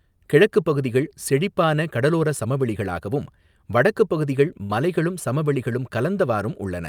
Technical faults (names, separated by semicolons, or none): burst of packet loss